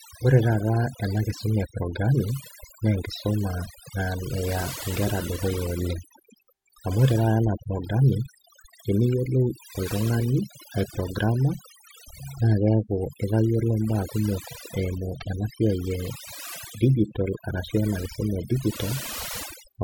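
A noise reduction stage set far too aggressively has been applied across the whole of this speech recording, producing overdone noise removal. The processor pulls individual frequency bands down or shuts them off wherever they sit close to its noise estimate, and the softer components of the voice get caught along with the noise. Between phrases the background drops away and breaks up into twinkling, chirpy specks.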